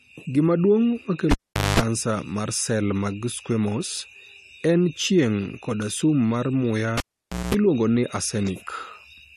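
A speech clip with a cable pulled and plugged in twice, at 1.31 to 1.80 s before "mar sel mag squamous" and 6.97 to 7.55 s after "koda sum mar muya". Each starts with a pop and drops out for about half a second. Then about 0.2 s of mains buzz, at 50 Hz and then 60 Hz, sounds while only the plug tip touches. A second pop marks the reconnection.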